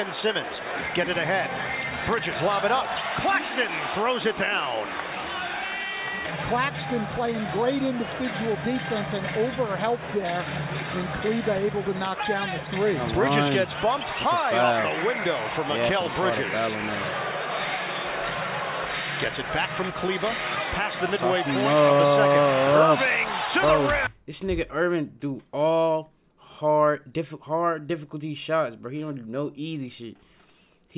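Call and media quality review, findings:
No findings from the call and media quality review.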